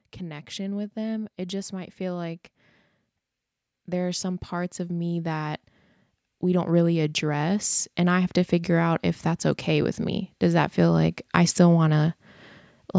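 Automatic gain rising shows up four times, at 0.18–2.42 s, 3.85–5.62 s, 6.41–9.08 s and 9.64–12.06 s. Each time the gain control hears quiet input and creeps up about 4 dB (about 5 dB in the last one), so voice and background swell together.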